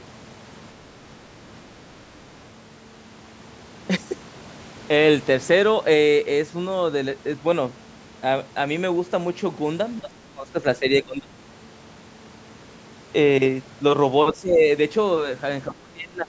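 Speech whose level dips three times, by up to about 20 dB: 10.01 to 11.34 s, 14.34 to 14.62 s, and 15.67 s to the end. This is likely speech suppressed in double talk. An echo canceller ducks the near talker while the far side speaks, so the voice is turned down in stretches rather than broken by brief codec-style dropouts.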